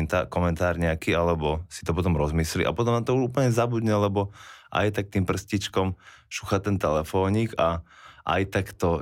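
Crude rate conversion affects this speech clip from 5.57 s to the end. The audio sounds as if it was resampled by simple linear interpolation with no anti-aliasing filter, which fits a 48 kHz to 44.1 kHz conversion. The uneven step between the two rates leaves a repeating error pattern about 40 dB below the signal. It is heard as a faint, gritty, inharmonic fizz that rides on the louder and brighter parts of the speech.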